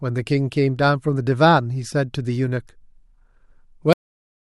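At 3.93 s the speech has a cut-off end: the final stretch of audio was never written out, so the sound stops mid-utterance and drops straight to digital silence for the last 0.6 s. Unlike a fade-out or a natural ending, there is no decay or room tail at all.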